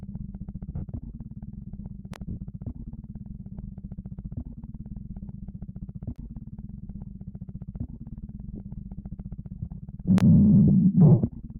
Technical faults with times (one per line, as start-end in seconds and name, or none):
0.00-11.59 noise suppressor applied to music or sounds
0.70-0.82 lost LE Audio frames
2.14-2.16 gap between chunks
2.29-2.37 lost LE Audio frames
8.56-8.59 lost LE Audio frames
10.68-10.70 lost LE Audio frames